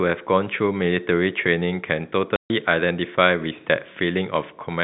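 Packet loss filled with silence: from 2.36 to 2.5 s the stream lost packets and the receiver played nothing in their place, cutting a 140 ms hole in the speech, which fits a run of 10 ms packets, with abrupt edges against the narrowband telephone sound.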